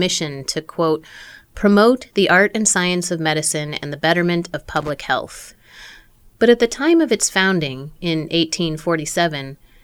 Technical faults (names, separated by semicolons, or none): loose connector crackle